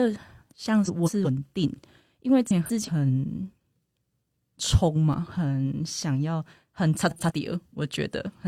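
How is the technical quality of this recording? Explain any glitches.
The speech has four audible glitches of two kinds: three scrambled stretches and one brief dropout.

At 0.86–1.26 s, 2.47–2.90 s and 7.10–7.32 s there is a garbled flutter. These are frames out of order. Two neighbouring runs of about 186 ms each (93 ms in the last case) were decoded in swapped order, so each stretch plays with its halves exchanged, with no time lost.

At 5.13 s there is a brief tick or dip. This is a block of digital silence lasting about 2.9 ms, which fits a 128-sample buffer that was not filled in time. The audio drops abruptly to silence and returns without any fade.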